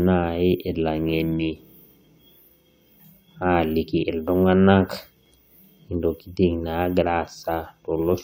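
Nothing technically wrong turns up in this bit of speech; there's no fault to point to anywhere in it.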